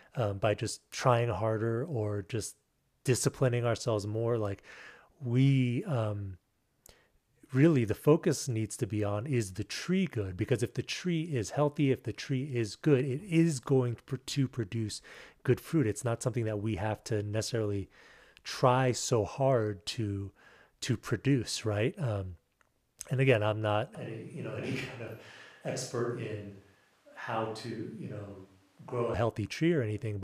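A speech recording in which, from 23.95 to 29.14 s, the sound abruptly turns roomy and hollow, thins in the bass and drops by about 10 dB, with background noise sitting roughly 35 dB under the speech. This is likely a switch to a distant microphone. The waveform shrinks suddenly, and the spectrogram shows weaker low frequencies and a raised noise floor between the two hard edges.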